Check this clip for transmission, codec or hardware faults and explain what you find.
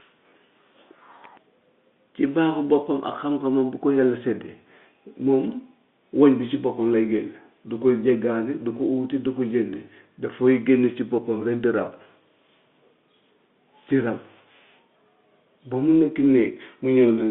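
The speech comes through an ordinary G.711 telephone channel with its usual band of about 200 Hz to 3.6 kHz, and nothing in the signal points to a transmission, codec or hardware fault.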